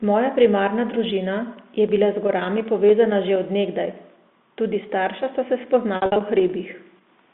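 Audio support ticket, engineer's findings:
Packet loss with pitch repetition, 5.96–6.16 s after "sta se": buzzy held stretches, 140 ms lost across 200 ms; spectrogram shows frozen harmonics, waveform repeated cycles.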